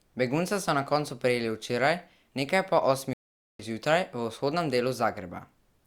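At 3.13 s, just after "prijeli včeraj nekaj po", a stream reconnect cuts the speech to silence for about 0.46 s until 3.62 s. Unlike a simple dropout, the player restarts decoding mid-stream, so the sound resumes roughly a fifth of a second further on, with material skipped.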